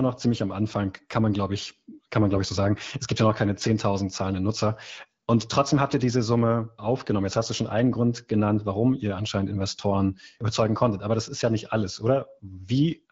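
No technical faults are audible.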